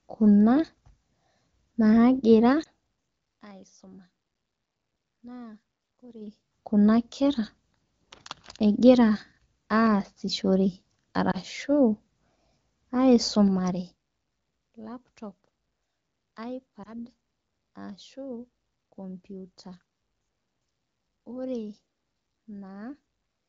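Lost AMR speech frames occur at 2.63 to 2.68 s, 11.31 to 11.37 s and 16.83 to 16.93 s. Each time, a single 20 ms frame fails its radio checksum. The decoder fills the gap by repeating the last good pitch and vocal tract settings at reduced gain, so each spot is heard as a brief dip or warble. The surrounding wideband sound is clear, which fits a mid-to-high AMR-WB rate.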